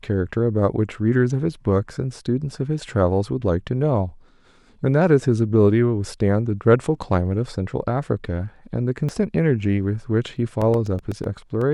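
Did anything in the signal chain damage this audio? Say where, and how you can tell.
Yes. Compressed frames are skipped at 9.09 s, a fault at the codec or storage stage. The speech jumps forward by about two frames, roughly 150 ms, and the frames fit an 85.3 ms frame length. Those frames were either missing from the file or rejected by the decoder as corrupt. The jump by whole frames points to a frame-based codec rather than a raw sample loss.

Periodic USB or driver dropouts run from 10.37 s to 11.62 s, at the driver or buffer stage. About ten tiny gaps of silence, each roughly a millisecond long, arrive every 0.125 s, eight per second. They are heard as a steady ticking laid over the speech. That strict regularity is the giveaway: a background task stalls the USB bus or audio driver on a fixed schedule, and each stall leaves a brief hole where samples should be.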